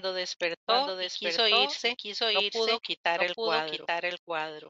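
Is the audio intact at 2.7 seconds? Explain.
No. At 2.7 seconds, as through the whole clip, the speech is heard twice: a second, somewhat quieter full-band copy trails the original by roughly 0.7 s, with no room colour or decay, so each phrase overlaps a dry echo of what came just before. This is a doubled audio track, likely from the same signal being captured again over a slower path, or an edit holding two copies out of step.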